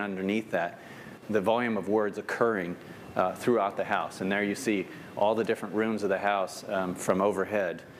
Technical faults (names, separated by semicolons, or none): one channel drops out